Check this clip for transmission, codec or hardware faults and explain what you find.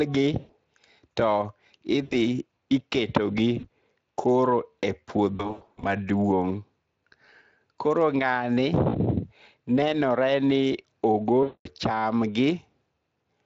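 There is one kind of fault: VoIP packet loss concealed by the speech codec. It occurs at 0.39–0.52 s, 2.03–2.15 s, 3.59–3.69 s, 5.35–5.88 s, 8.89–8.97 s and 11.43–11.68 s. The 5.35 s event is scattered, with runs up to 100 ms. Packets vanish and the decoder extends its last pitch and filter at falling gain. Speech smears into a fading buzz, with weakness lingering afterwards.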